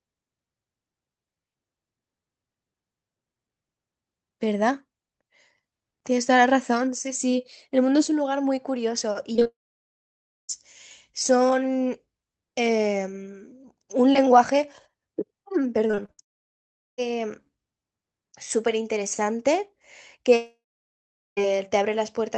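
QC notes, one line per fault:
9.33–9.47 s, repeated packet loss (robotic sound): four short gaps, longest 21 ms, each patched by extending the last sound, giving choppy fragments.
9.47–10.51 s, long network dropout: likely a loss of incoming audio, the last sound stretches into a fading buzz, then about 0.95 s of silence before audio resumes.
15.88–16.20 s, repeated packet loss (robotic sound): five gaps up to 58 ms, concealed by repeating prior sound, covering about 41% of the span, so it turns choppy and broken.
16.22–17.00 s, long network dropout: likely a break in arriving audio, a brief fading continuation then about 0.75 s of silence, and the lost portion never returns.
20.36–21.43 s, long network dropout: likely incoming audio stopped, a decaying buzz gives way to about 0.78 s of silence before audio returns with the missing part skipped.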